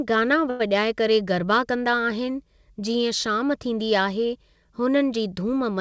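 A short stall from a late packet occurs at 0.50 to 0.62 s, just before "वॼाए करे गरबा कंदा". A packet arrived late and the jitter buffer ran dry, so the receiver stretched the last stretch of speech for about 96 ms until the data came in, then resumed from the same point with nothing lost. The held sound drags slightly, with a faint buzz or dip. Through the call path, the audio stops at 8 kHz, which fits a wideband codec such as G.722.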